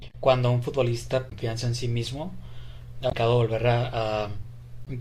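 Damaged data in the compressed stream at 1.29–1.33, 3.09–3.13 and 4.84–4.87 s: corrupted frames make the decoder lose sync, producing a brief chirp, squawk, click or short hole in the speech.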